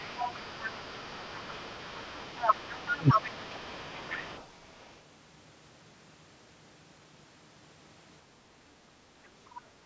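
Other side's voice leaking through runs from 0.0 to 4.44 s: a second, fainter voice sits under the main speech, roughly 25 dB below it. This is likely the far end playing from the talker's loudspeaker and being picked up again by the microphone, with the echo canceller leaving a residue it should have removed. Above 8 kHz there is nothing, as expected from the call's microphone processing.

Speech suppressed in double talk follows inside that stretch, from 2.97 to 3.15 s: the talker's voice briefly sinks, dropping by something like 25 dB at its deepest, for about 150 ms in total. Both voices are present at that moment, and the echo canceller likely failed to tell the near talker from the loudspeaker echo, so it turned everything down together. The result is a short hole punched into the speech.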